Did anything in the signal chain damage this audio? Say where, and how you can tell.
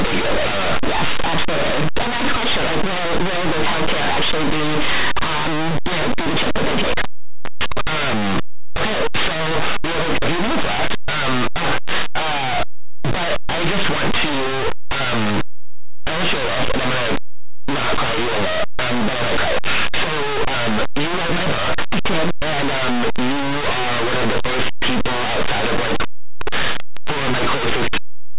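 Yes. Linear audio read as companded, throughout the speech: plain linear 8-bit samples were decoded as mu-law codes at the sample-format conversion stage. Small values just either side of zero expand unevenly, some to near full scale, producing constant harsh, loud distortion over the speech.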